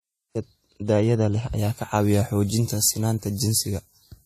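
From the first moment of this speech clip, the top of the spectrum stops cleanly at 14 kHz, and two kinds of codec damage sit on top of each other: two different kinds of codec artefact heard together. That layering is the mark of transcoding between lossy codecs, likely a WMA encode at around 64 kbit/s re-encoded as AAC-LC at around 48 kbit/s. A single low-bitrate encode would show only one artefact character, not two competing ones.

From 1.59 s to the end, the treble jumps up. Sibilants turn hard and spitty and the voice thins out, with 10 kHz sitting about 14 dB above 1 kHz. This is pre-emphasis left on: a treble boost shaped like the 75 µs FM curve was applied and the matching de-emphasis never followed. Unlike a simple bright EQ or a peaky microphone, the lift keeps climbing smoothly and steadily with frequency up to the cut-off.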